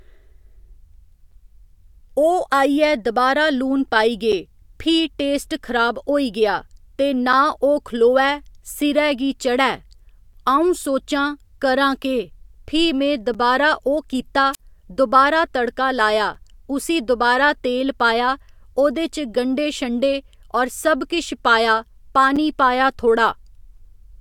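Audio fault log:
4.32, 13.34, 16.35, 22.36 s: gap between chunks. Tiny hard-edged holes of about 6.5 ms break the speech, the first between "दबारा लून पाई गे" and "फ्ही टेस्ट खराब होई", another just before "उसी दोबारा". Audio arriving in 3.0 s chunks leaves silence at each join.
14.53–14.60 s: wireless microphone squelch dropout. After "ओह् कित्ता", hiss briefly swells, then the speech cuts to near silence for about 46 ms before returning with "दोबारा तड़का". The analogue radio signal faded far enough that the receiver's squelch muted its output.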